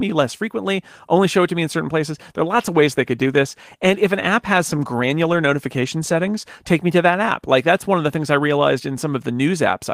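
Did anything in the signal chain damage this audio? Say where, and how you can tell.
Yes. A call bitrate drop hits the codec stage from 2.55 to 6.57 s, clearing just before "take me to that". The network's bandwidth estimate fell, so the encoder coded more coarsely, consistent with a fall from 32 to 18 kbps. The sound turns rough and muffled, and a spectrogram shows the upper band cut off and smeared across that span.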